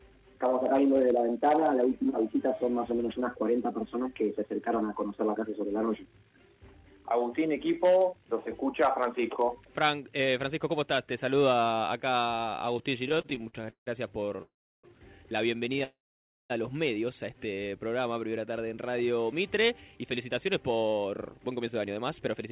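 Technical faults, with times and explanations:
13.04–14.40 s, repeated stalls (stutter): the audio catches and restarts again and again, close to twenty times in under 1.4 s. Each hitch holds the last sound for a moment, the longest about 163 ms, and together they fill roughly 31% of the span, about 0.42 s. Packets were arriving more slowly than they were being played, so the jitter buffer kept running dry and the receiver extended the previous sound each time. Almost nothing is lost, but the audio drags.
14.42–14.86 s and 15.84–16.52 s, call audio freeze: the sound stops and hangs, a brief continuation of the last sound fading out into silence lasting about 0.34 s in the first and about 0.55 s in the second. Then it resumes exactly where it left off. The likely cause is a hold-up in packet delivery that emptied the jitter buffer, so the receiver filled about 411 ms and 660 ms respectively. 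The gaps are inserted time, not missing audio, and everything after them arrives later.
19.10–22.37 s, jitter buffer speed-up: the audio runs noticeably quicker, at about 109% of normal pace, with the pitch unchanged, giving it a hurried feel. The buffer was holding more audio than its target, so the receiver trimmed many short pitch-period-sized pieces in a row, roughly 0.3 s in total, to bring the delay back down. The whole clip is band-limited with nothing above 4 kHz, consistent with a 64 kbps G.711 A-law call path.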